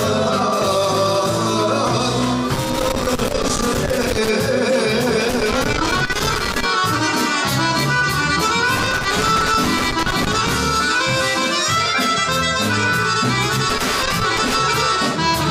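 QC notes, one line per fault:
2.54–4.29 s, 5.30–6.63 s, 8.76–10.54 s, 13.70–14.60 s: loose connector crackle. Irregular scratchy bursts as a worn contact intermittently breaks, chopping the signal.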